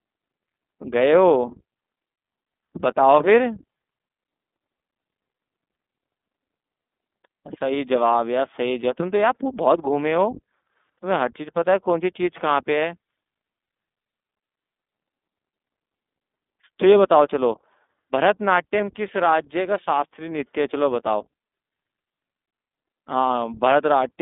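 Throughout the speech, the signal has passed through the iLBC codec, a narrowband VoIP coder that codes each short frame's excitation on its own, with no carry-over from the frame before. The coarse texture fits its 20 ms, 15.2 kbps mode. The line band runs from 200 Hz to 3.6 kHz and nothing survives above 3.8 kHz, so the sound is thin and muffled. The codec damage is plainly audible as a rough, slightly synthetic grain.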